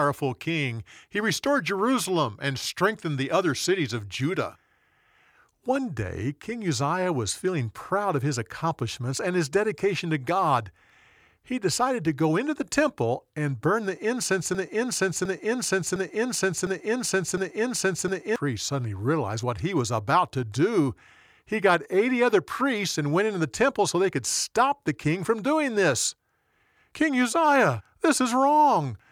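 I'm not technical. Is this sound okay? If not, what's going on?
No. From 14.55 to 18.36 s, a 0.71-second snippet repeats five times, a broken-record loop, likely a stalled player, before "suddenly realized what he".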